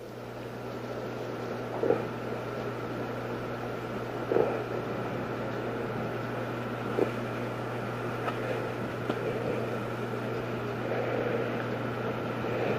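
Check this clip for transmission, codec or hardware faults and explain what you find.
Crude rate conversion from 6.86 to 10.27 s: samples were repeated without filtering, which fits a 44.1 kHz to 48 kHz change, leaving a gritty, inharmonic fizz around 30 dB below the sound.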